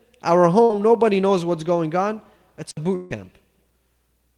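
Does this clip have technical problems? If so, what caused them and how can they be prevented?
Yes. There are two kinds of fault.

Burst of packet loss happens twice: from 0.63 to 0.71 s, just before "nobody knows what's going", and from 2.95 to 3.12 s. Each time a run of audio packets failed to arrive in time, so the receiver stretched the last sound it had and faded it out. The first gap is filled for about 60 ms, and the second for about 150 ms, with roughly 140 ms of real audio lost. On a spectrogram the frequency content freezes into flat, smeared horizontal bands that dim toward the end. On the waveform the same cycle repeats at falling amplitude before normal audio returns, slightly further along. A larger jitter buffer, forward error correction, or a less congested network would prevent it.

Digital wireless dropout occurs at 2.71 to 2.77 s. The radio link lost too much data and the receiver muted for about 60 ms with a very fast fade, leaving a clean hole of near silence with no crackle or noise burst on either side. 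On the waveform this is a flat line with sharp edges. On a spectrogram it is a narrow blank vertical column running through all frequencies. Keeping the transmitter within range and line of sight, and avoiding crowded radio channels, would prevent it.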